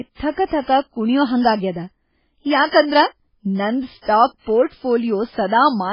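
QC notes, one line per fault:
Throughout: MP3 compression, likely the cause. Nothing survives above 5.3 kHz, and the speech sounds watery and swirly as weak bands flicker in and out between frames. S sounds go metallic and attacks smear. Damage this heavy fits a bitrate around 16 kbps.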